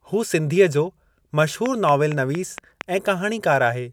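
From 1.66 to 2.82 s, a train of clicks: about seven evenly spaced pulses at 4.3 per second, roughly 10 dB above the speech, likely electrical interference.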